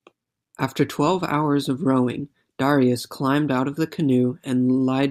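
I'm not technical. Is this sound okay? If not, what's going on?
Yes, no faults heard in this speech recording.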